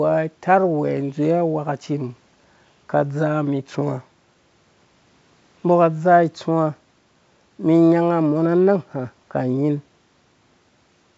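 No technical faults are audible.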